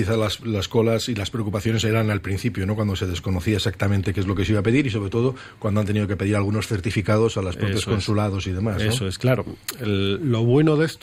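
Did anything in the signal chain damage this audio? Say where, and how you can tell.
No, nothing in the signal chain has audibly damaged this audio, and every stage from capture to playback delivers a continuous, intact signal with no level, timing or bandwidth problems to point to.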